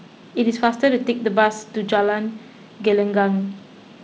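Nothing stood out on listening to this speech recording, which carries the ordinary character of G.722 wideband telephone coding.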